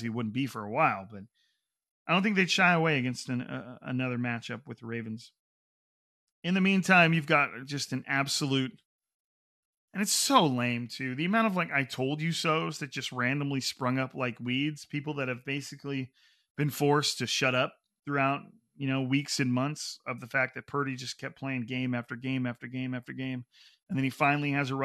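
No technical faults can be heard anywhere in the speech. There is nothing to time or explain.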